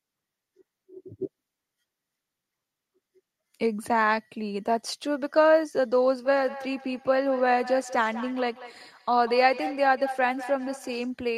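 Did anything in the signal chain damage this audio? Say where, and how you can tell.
Yes. From 6.25 s to 11.17 s, each word comes back thinner and ringing, roughly every fifth of a second, peaking about 13 dB below the speech. This is feedback echo between two devices in call processing: one device replays the other's microphone, which re-captures it beyond its own echo canceller's reach.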